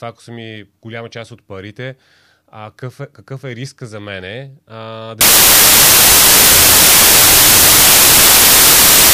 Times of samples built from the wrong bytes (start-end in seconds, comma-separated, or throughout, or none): 5.21-9.13